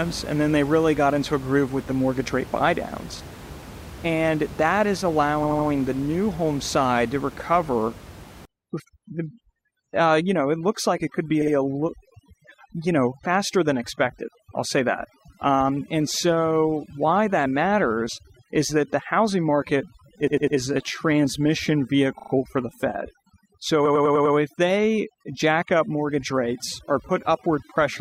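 At 5.43 s, between "that is" and "the new home side", repeated frames cause a stutter. An 80 ms block plays three extra times, adding 240 ms. The jumps fit a short run of compressed frames being sent again.

From 8.45 s, just after "home side to recover", to the end, overdone noise removal takes hold. The room noise sat about 17 dB below the speech. The reducer now cuts bands near that level too hard. The background drops and breaks up into twinkling specks. Quiet parts of the speech are lost.

More repeated frames follow. At 11.41 s a 60 ms block repeats twice, adding 120 ms. At 20.27 s a 100 ms block repeats three times, adding 300 ms. At 22.19 s a 40 ms block repeats three times, adding 120 ms. At 23.85 s a 100 ms block repeats five times, adding 500 ms. Each one stutters at the repeat points.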